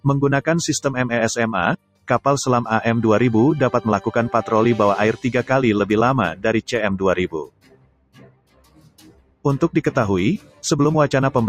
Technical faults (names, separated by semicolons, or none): noise suppressor applied to music or sounds; sound cut by the noise suppressor